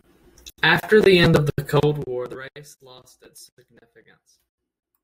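From 1.78 to 2.67 s, just after "the end of the" and before "lost its", the speech shows zipper noise. A gain drop of roughly 25 dB was applied in discrete jumps, at around 200 steps per second, instead of being ramped smoothly. Each jump puts a tiny discontinuity into the waveform, so while the level falls the voice carries a fine, rapid ticking that sounds like a zipper being pulled.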